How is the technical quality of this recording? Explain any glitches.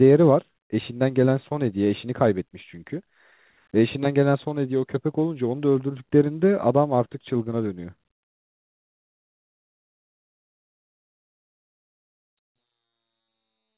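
The main problem is loudspeaker feedback squeal, which hits twice: from 4.18 to 5.00 s, and again from 12.38 s right to the end. Each time a mic is picking up its own speaker, and the loop runs away at 4 kHz, so a pure tone swells up in about a third of a second to roughly 10 dB, then about 15 dB, over the speech. The whole thing also sits on a narrowband call line with nothing above 4 kHz, which fits G.711 at 64 kbps.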